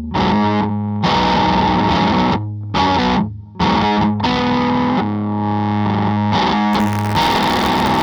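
From 6.72 s to the end, buffer tearing sets in: the writer and reader of the playback ring buffer have slipped, so each period carries a small slice of audio about 40 ms stale, butted hard against current material. The result is a steady robotic buzz at 86.1 Hz, which fits a 512-sample buffer, riding only on the signal. A waveform shows abrupt steps repeating every 11.6 ms; a spectrogram shows thin vertical lines at that spacing plus an 86 Hz harmonic comb.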